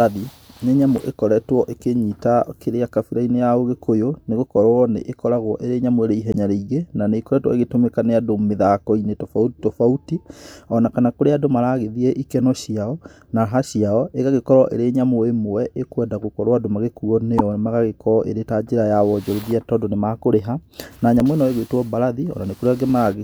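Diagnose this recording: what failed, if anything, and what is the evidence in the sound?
The codec stage failed, with damaged data in the compressed stream. Brief disturbances break into the speech at 0.98–1.00 s, 6.32–6.36 s, 17.38–17.41 s and 21.2 s. At each one, corrupted frames made the decoder misread the data and lose sync until it found a valid frame header.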